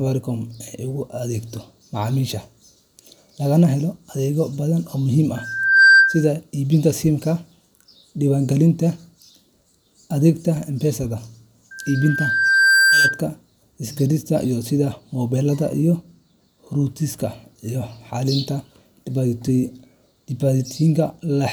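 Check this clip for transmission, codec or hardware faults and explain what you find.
Two kinds of fault are present in the speech: two isolated clicks and two bursts of acoustic feedback.

Dropped samples, at 4.19 s just after "lagana helo" and at 15.73 s just after "sida moobilada": each is a single sharp click. The likely cause is a tiny gap in the sample stream, a small fraction of a millisecond, so the waveform jumps abruptly to a later value. Nothing audible is removed; the discontinuity itself produces the brief broadband tick.

Loudspeaker feedback squeal, from 5.36 to 6.30 s and again from 11.71 to 13.21 s: a steady 1.6 kHz tone rises out of the speech and swells into a whistle. The microphone is hearing its own loudspeaker, and at that frequency the loop gain tops unity, so the tone feeds on itself. It builds over about half a second the first time, reaching roughly 10 dB above the speech. 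The second time it builds over about a second and peaks roughly 5 dB above.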